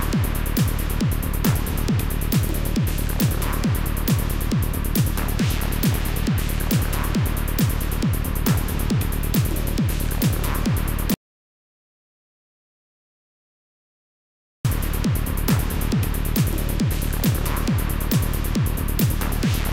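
The input feed was likely lost for a stretch, through a disconnected device, a failed link or a mute, while the recorder kept writing silence, so this recording of sounds has an audio dropout to silence from 11.14 to 14.65 s. The sound cuts off mid-flow and returns abruptly after about 3.5 s of complete silence, with no room tone underneath, and whatever happened during that gap is missing from the recording.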